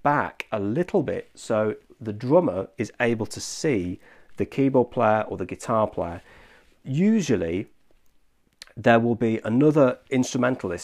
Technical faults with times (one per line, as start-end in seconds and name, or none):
none